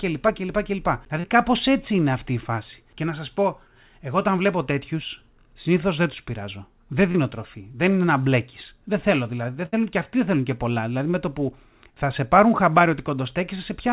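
At 1.20 to 1.26 s, a short concealed packet loss occurs: about 40 ms of the call arrived too late for the decoder. The receiver bridged the hole with roughly 35 ms of sound extrapolated from what came just before, then crossfaded back into the real signal. The result is a brief smear in the speech. The same fault recurs at 7.12 to 7.17 s, where about 20 ms went missing and some 27 ms of synthesized fill covers it, heard as a quick wobble.

At 9.66 to 9.75 s comes a burst of packet loss, a run of about 60 ms that never arrived in time. The concealment stretched the last sound for roughly 66 ms while fading it down, producing a held buzz or dying hiss in place of real speech. When the audio picks up again, the stretch in between is simply gone. Throughout, the sound has nothing above 4 kHz, which fits a narrowband G.711 call path.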